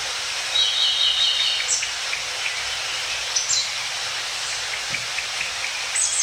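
No technical faults can be heard anywhere in this recording of sounds.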